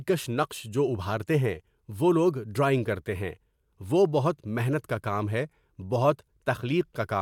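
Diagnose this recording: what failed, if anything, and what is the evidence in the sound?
Nothing failed here: listening through the speech, no stage of the chain gives itself away, with nothing in the sound that points to trouble anywhere along the path.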